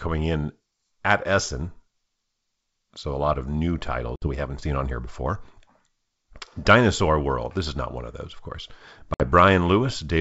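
At 4.16 s and again at 9.14 s, the speech drops into abrupt silence of about 60 ms, within disturbances lasting about 0.12 s and 0.14 s, each hole suggesting roughly three lost packets. This is packet loss on an ADPCM call, heard through otherwise clean G.722 wideband coding. The gaps were filled with silence, so the decoder's adaptive predictor and step size lost track of the sender's. When speech resumes, it is briefly slightly distorted until the decoder realigns.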